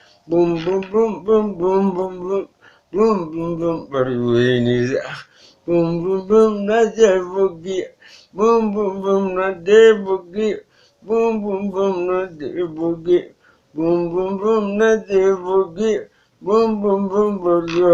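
No faults are audible anywhere in the recording.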